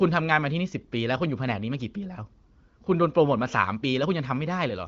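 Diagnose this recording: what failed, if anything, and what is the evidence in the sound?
Nothing failed; no faults heard.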